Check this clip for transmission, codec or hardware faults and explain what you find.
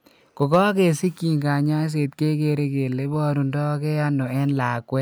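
One fault is audible: hard clipping. It runs from 0.42 to 0.59 s. The speech drives a stage past its ceiling by about 3 dB, and the waveform peaks are sliced flat. Those squared-off tops create harmonics high in the spectrum that the speech itself does not contain. The overload is modest, so it is heard as a brief crackle riding on the loudest moments. It is not a sustained fuzz.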